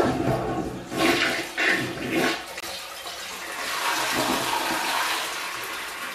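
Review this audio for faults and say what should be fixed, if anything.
A corrupt frame muted the audio at 2.60 s. The sound cuts to silence abruptly and returns at 2.64 s, a gap of about 41 ms. That length fits a single lost frame. Flipped bits damaged the compressed data, so the decoder rejected it. The player then filled the slot with silence. Playback timing is preserved, so nothing after the gap shifts. Fix it by re-encoding from the source or by repairing the damaged frame. To prevent it, use error-checked storage and transmission, such as checksums with retransmission, so corrupted frames never reach the decoder.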